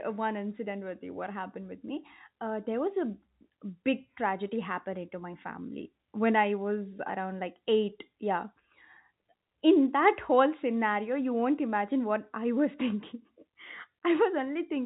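No technical faults are audible.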